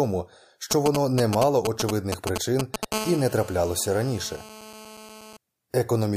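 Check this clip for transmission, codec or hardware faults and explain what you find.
Two hardware faults from a nearby 2G phone are audible. Both come from radio pulses being rectified in the audio circuit.

GSM signalling bursts run from 0.71 to 2.85 s. Short groups of pulses at 217 Hz make galloping ticks and brief buzzes, roughly as loud as the speech.

GSM phone buzz follows from 2.92 to 5.37 s. Steady call transmission at 217 Hz gives a hard, raspy, harmonic-rich buzz, about 14 dB below the speech.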